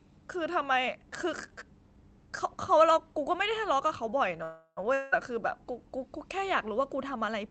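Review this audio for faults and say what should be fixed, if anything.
From 4.43 to 4.86 s the speech stalls. The last sound carries on as a fading buzz for about a third of a second and ends in roughly 60 ms of silence. The speech then resumes where it left off, now about 334 ms later than before. This is a call audio freeze. Packets were most likely held up in transit, so the jitter buffer ran dry and the receiver filled the wait with concealment instead of dropping anything. To prevent it, give the jitter buffer enough headroom to absorb delay spikes of this size on the network path.

Shortly after, from 4.94 to 5.14 s, the sound smears into a similar fading hiss for about 180 ms. When it returns, that 180 ms of speech is gone for good rather than delayed. This is a long network dropout. The packets for that stretch most likely never arrived, so the receiver could only conceal the hole and then skip ahead. 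To prevent it, add packet-loss protection such as Opus in-band FEC or redundancy, and fix the loss on the network link.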